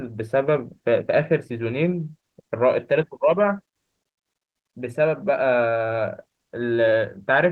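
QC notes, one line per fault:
No faults detected.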